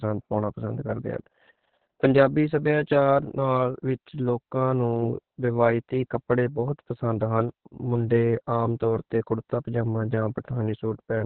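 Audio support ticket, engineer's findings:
Opus voice compression, whole clip. Speech muffled, hoarse, faintly robotic. Nothing above 4.5 kHz, so narrowband SILK coding. Coarse excitation coding causes the rasp. Heavy damage points to a very low bitrate, around 6 kbps, with long 60 ms frames.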